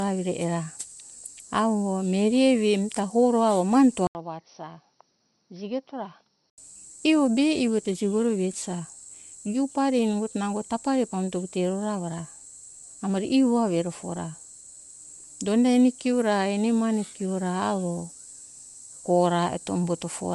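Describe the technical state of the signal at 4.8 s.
At 4.8 s the sound sits inside a stretch from 4.07 to 6.58 s where the input has switched to a poorer device, most likely another microphone or a headset's call profile. The switch opens with an 80 ms silence at 4.07 s. After it the level falls by roughly 10 dB, a faint new noise floor sits well below the signal, and the tone turns dull and boxy. On a spectrogram the energy ceiling drops abruptly to 5.9 kHz with an empty band above it. The waveform shows the short gap, then a visibly smaller envelope.

Underneath this, throughout the clip, the speech carries plainly audible coding damage that is likely Bluetooth LC3 compression. Its grainy, breathy edge fits a codec working in 10 ms frames at around 48 kbps, which discards upper-spectrum detail and fills gaps with noise. Outside the switched span a spectrogram shows a hard ceiling at 11.5 kHz with speckled, noise-filled patches just below it. 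At this moment the lower 5.9 kHz ceiling of the poorer input hides that 11.5 kHz limit.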